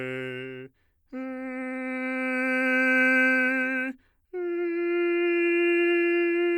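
Music, with no technical fault to be heard anywhere in the clip. Nothing breaks up, drops out or shifts in timing or level at any point.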